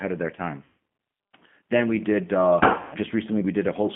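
From start to finish the speech carries G.729 codec coloration: the band is held to roughly 150 Hz to 3.4 kHz, and a clearly rough, synthetic texture comes from rebuilding each 10 ms frame from a filter, pitch predictor and sparse pulses, which fits an 8 kbit/s G.729A stream.

VoIP packet loss concealed by the speech codec appears at 0.64 to 0.74 s, where about 180 ms of audio was lost, and again at 2.79 to 2.97 s, where about 140 ms was lost. Each time, the decoder stretches the last pitch and filter into a buzzy tone or coloured noise that fades, and the sound stays weak for a moment after the packets return.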